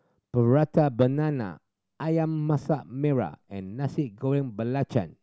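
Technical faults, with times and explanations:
Nothing technical stands out here; the speech comes across without any audible faults.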